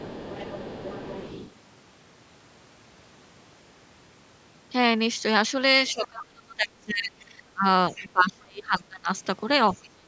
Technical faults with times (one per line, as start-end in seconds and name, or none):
0.00-1.53 other side's voice leaking through
5.88-6.07 other side's voice leaking through
5.92-7.65 speech suppressed in double talk
7.91-9.09 speech suppressed in double talk
7.95-8.07 other side's voice leaking through
9.73-10.07 speech suppressed in double talk